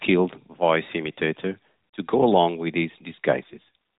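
From 3.44 to 3.75 s, an AMR rate drop makes the speech buzzier and more synthetic, likely 12.2 falling to 4.75 kbps. The 4 kHz band stays intact, with no gap.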